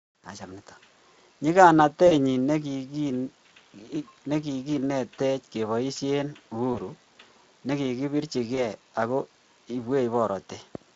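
VoIP packet loss concealed by the speech codec occurs at 2.07–2.15 s, 6.73–6.79 s and 8.55–8.60 s. The decoder extrapolates the missing audio into a buzzy tone or coloured noise that fades, which shows on a spectrogram as smeared, decaying energy.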